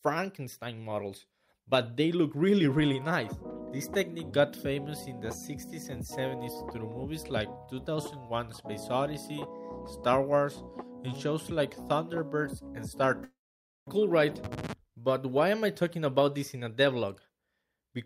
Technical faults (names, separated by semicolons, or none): long network dropout